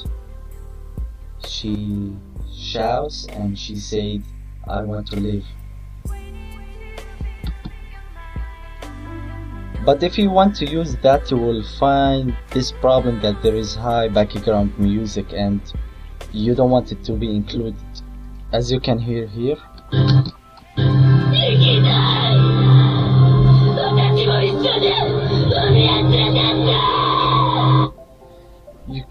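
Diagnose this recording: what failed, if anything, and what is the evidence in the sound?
From 1.75 to 5.45 s the sound doubles with an equal-level slap 40 ms behind: channel delay (doubling), one channel buffered late at the driver, then summed to mono.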